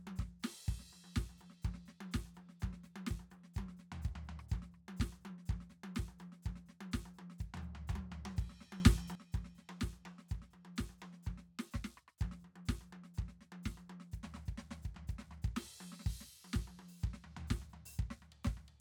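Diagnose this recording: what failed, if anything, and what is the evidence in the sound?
A sudden gain jump lifts the music and its noise floor together by about 12 dB from 8.8 s to 9.15 s. The waveform envelope steps at single-sample edges, and the spectrogram brightens uniformly across all bands. The likely cause is an unramped digital gain change or bit shift in processing.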